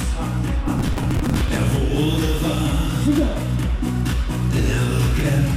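From 0.68 to 1.57 s the audio breaks into processor overload crackle, a gritty tearing over the sound. The processor is missing buffer deadlines back to back, with buffers around 10 ms, and each missed buffer is simply skipped. That leaves dozens of hard-edged gaps until the load clears.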